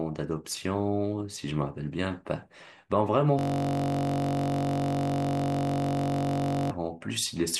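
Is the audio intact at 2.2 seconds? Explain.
Yes, at 2.2 seconds the speech plays through intact, with no dropout, click, distortion or other audible fault at that moment.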